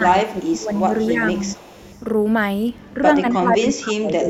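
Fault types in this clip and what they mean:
Speech suppressed in double talk: When both ends spoke at once, the echo canceller likely could not tell the local talker from loudspeaker echo and turned both down. The speech dips by about 15 dB in patches, from 0.0 to 1.22 s and again from 2.94 s to the end.
Echo leak: The echo canceller likely failed to remove all of the loudspeaker sound its microphone picked up and sent the remainder back. A faint copy of the speech, about 25 dB down, trails 264 ms behind from 0.39 to 2.02 s, with a short scrap at 3.32–3.37 s.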